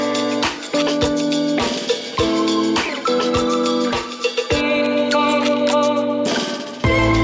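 No technical faults are audible.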